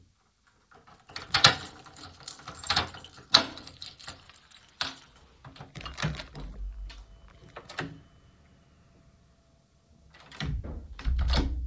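No technical faults are audible.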